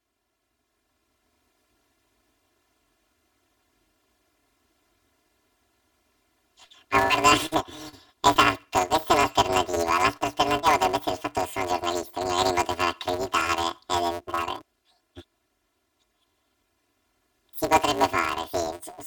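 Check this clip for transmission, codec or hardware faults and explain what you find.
The speech carries one fault throughout: planar audio read as interleaved. Each stereo block stores all left samples and then all right ones, but the reader treats the data as alternating left-right pairs, so each channel gets half of one channel's block squeezed to double speed, then half of the other's. Blocks are about 5.8 ms long, which fits a 256-sample block, so there is no audible octave jump. Instead the voice takes on a robotic buzz at about 172 Hz, the block rate.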